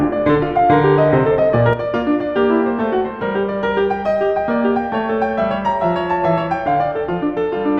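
At 1.73 s the music drops abruptly by about 6 dB and stays lower to the end. The likely cause is that one channel drops out, halving the mono sum. The waveform steps down sharply, and the spectrogram dims evenly across frequencies.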